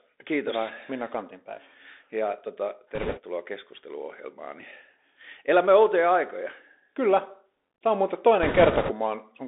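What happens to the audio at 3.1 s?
Between 2.95 and 3.20 s the Bluetooth link suffers bit errors: roughly one bit in twenty flips. Each CVSD bit only nudges the waveform one small step up or down, and the adaptive step recovers quickly, so the damage sounds like a brief rushing, crackly noise over the speech. There are no sharp clicks or gaps, which is what separates it from packet loss or dropouts.

Underneath, the narrowband Bluetooth CVSD headset codec is plainly audible. The band is limited to roughly 250 Hz to 3.6 kHz, and the coarse one-bit up/down coding leaves a granular hiss and scratchy s sounds.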